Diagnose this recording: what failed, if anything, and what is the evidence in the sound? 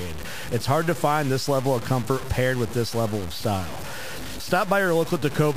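Grainy distortion tracks the speech throughout, with quiet passages turning gritty. This is likely low bit depth without dither: a sample-format conversion truncating to roughly 5 bits.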